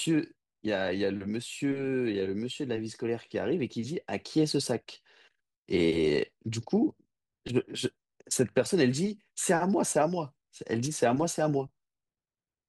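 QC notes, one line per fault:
No faults found on this speech recording; nothing to log.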